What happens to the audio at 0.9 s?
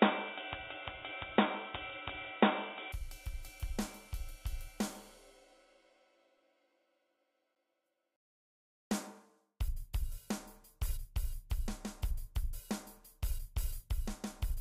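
At 0.9 s you're inside the stretch from 0.0 to 2.92 s where the input was likely switched to a poorer device. Everything above 3.8 kHz is gone, so it sounds dull and boxy, with a bit of extra background noise well under the sound and the level a few dB different.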